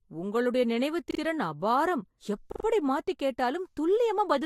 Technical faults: repeated buffer

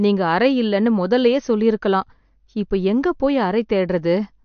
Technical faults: MP3 compression

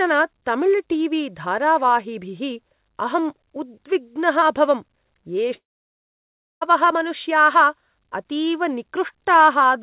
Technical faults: long network dropout

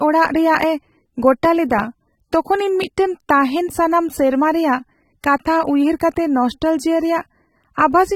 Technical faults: AAC compression

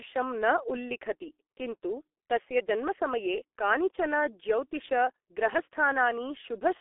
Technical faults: G.723.1 codec

